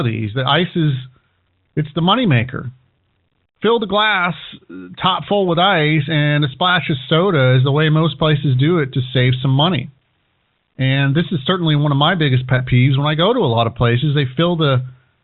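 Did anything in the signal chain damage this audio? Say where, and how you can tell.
Yes. A brief buzzy hold at 12.58 to 12.60 s, after "one of my biggest", is network packet loss with pitch repetition: the last pitch period was replayed across a gap that fits one lost 20 ms packet.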